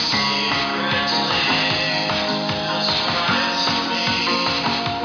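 No technical faults are audible anywhere in this audio.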